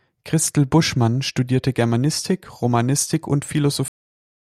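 Speech clip with a cut-off end: at 3.88 s the sound stops mid-utterance and drops straight to digital silence, with no decay. Unlike a dropout, it never resumes, because the final buffers were never written.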